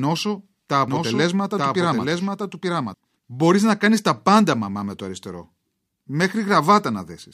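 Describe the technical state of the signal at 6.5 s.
At 6.5 s the signal is intact, with no technical fault audible at that point in the speech.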